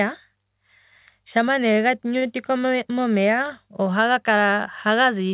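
Speech over a call codec band-limited below 4 kHz has a short stall from a late packet at 2.18–2.24 s: the jitter buffer emptied, so about 35 ms of sound was stretched, nothing lost, pushing later audio 35 ms behind. A spectrogram shows smeared, repeated harmonics there, and a waveform shows a looped cycle.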